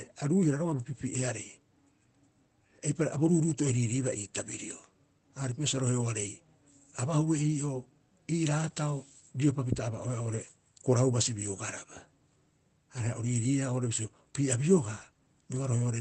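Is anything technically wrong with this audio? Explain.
No, nothing is technically wrong: the speech comes through a normally working call path whose audio tops out around 8 kHz, which fits Opus coding at roughly 24 kbps.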